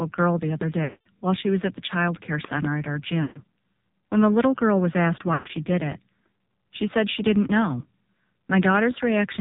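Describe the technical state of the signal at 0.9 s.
At 0.9 s the audio sits inside a run of lost AMR speech frames, spanning 0.84 to 1.07 s, about 220 ms, which fits eleven consecutive 20 ms frames failing their checksum. The decoder fills the gap by repeating the last good pitch and vocal tract settings at falling gain, so the preceding sound stretches into a held, buzzy tone that fades to silence within 0.1 to 0.2 s. The audio then returns weak or rough on "while she was at". A plain packet dropout would cut straight to silence or a click. Here the sound lingers and then decays.

Underneath, the whole clip carries the AMR narrowband mobile codec, with heavy damage that points to a low mode of around 5.9 kbps. Nothing above 4 kHz survives, and the sparse pulse excitation gives a buzzy, synthetic timbre. That dull, band-limited quality is steady and sets this apart from the brief, time-bound concealment at 0.9 s, which fades out rather than stopping abruptly.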